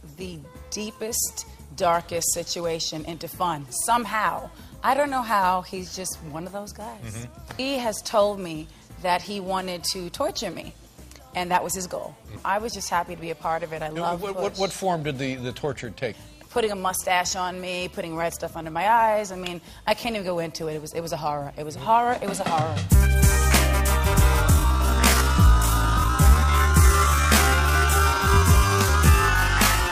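From 24.48 s right through to the end at 29.92 s, there's a time-stretched section. The pace abruptly drops to about 0.55 times normal speed, so everything drags, but the pitch doesn't fall with it. That combination likely comes from software stretching that stretch of audio to fill a set length, repeating short pieces to hold the pitch steady while the timing slows.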